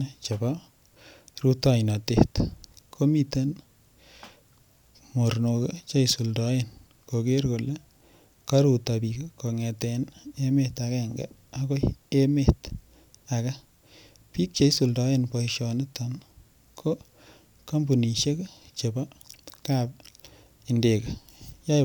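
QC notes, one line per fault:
No faults heard anywhere in this speech recording.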